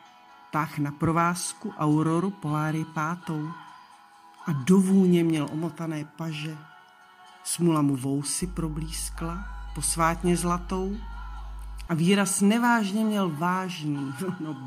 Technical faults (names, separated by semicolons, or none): mains hum